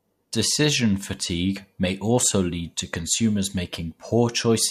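No technical faults are audible.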